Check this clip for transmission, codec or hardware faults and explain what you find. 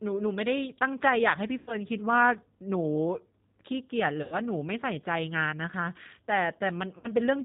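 Two faults are audible: low-bitrate codec coding across the whole speech clip, and three short dropouts that the decoder has papered over.

G.729 codec, throughout: the speech has a plainly audible rough, slightly synthetic edge, with no brightness above 4 kHz. This fits G.729A at 8 kbit/s. The decoder rebuilds each 10 ms frame from a vocal tract filter, a pitch predictor and a few pulses rather than the real waveform, so fine texture is lost.

VoIP packet loss concealed by the speech codec, at 1.58–1.76 s, 4.23–4.36 s and 6.98–7.08 s: each time the speech smears into a buzzy tone or coloured noise that fades, and then comes back weak and distorted. About 90 ms of audio went missing at each of the first two points and about 60 ms at the last, which fits two or three lost packets each time. The decoder filled each gap by repeating its last pitch and filter settings at falling gain. Because every frame is predicted from the one before, the damage continues briefly after real data returns.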